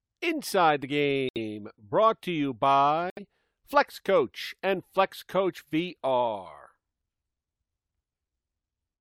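A speech clip with two runs of corrupt frames muted. Sound drops abruptly to silence from 1.27 to 1.39 s, and again from 3.10 to 3.21 s. Each gap lasts about a tenth of a second, which points to a run of several compressed frames. Damaged bits made the decoder reject those frames. The player filled their slots with silence. Timing is preserved, so the audio resumes on schedule after each hole.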